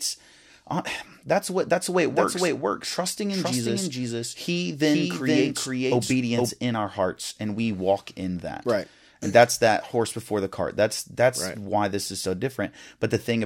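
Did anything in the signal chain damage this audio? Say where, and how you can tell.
Yes. A doubled audio track runs from 2.1 to 6.5 s. A dry, equally loud copy trails about half a second behind, likely from a slower second capture path.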